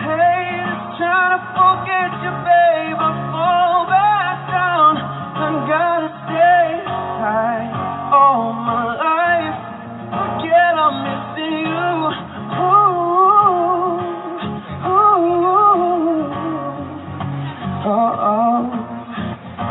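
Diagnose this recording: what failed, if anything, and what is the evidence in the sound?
Nothing in the chain audibly failed: no dropouts, clicks, distortion, hum or timing errors can be heard anywhere in the recording.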